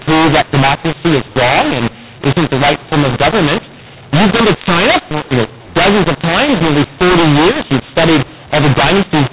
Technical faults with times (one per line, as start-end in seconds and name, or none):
0.00-9.32 mu-law and A-law mixed up